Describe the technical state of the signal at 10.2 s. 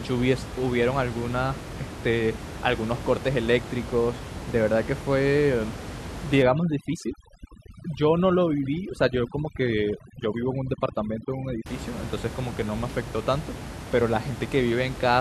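At 10.2 s the signal is inside a stretch of overdone noise removal, running from 6.43 to 11.66 s. The room noise, about 11 dB below the speech, is suppressed too hard. Frequency bands near that level are pulled down or cut. The background drops and breaks up into twinkling specks. Quieter parts of the voice vanish with it.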